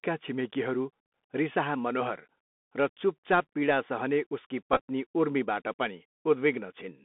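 Speech runs throughout with a thin, boxed-in telephone tone: nothing below about 200 Hz or above about 3.5 kHz comes through, s sounds turn scratchy, louder bright sounds break up, and a granular hiss sits under the whole recording. This is the Bluetooth CVSD headset codec, which fits a 64 kbit/s CVSD link. It sends one bit per sample saying only up or down, with an adapting step size, so fast high-frequency movement outruns the step and the coarse stepping leaves that grainy noise. Between 4.73 and 4.80 s, just after "पीडा सहने उसकी" and just before "उर्मीबाट पनि", the audio briefly turns into a short buzzy burst near 267 Hz. This is a Bluetooth headset packet repeated fault. Packets between headset and phone went missing and the last good packet was decoded again, with the repetition every 3.75 ms producing the buzz. About 34 ms of audio was lost, scattered across roughly 60 ms, with the longest unbroken run around 20 ms, which fits about nine lost packets.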